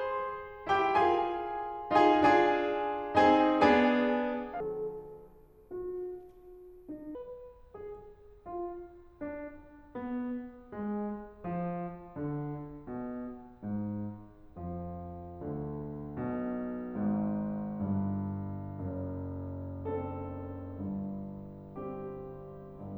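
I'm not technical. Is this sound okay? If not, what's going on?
No. From 4.60 to 7.15 s the music has a section at the wrong speed: it plays at about 0.6 times normal, so it drags and drops nearly an octave in pitch. Speed and pitch fall together, likely from playback running on a mismatched clock.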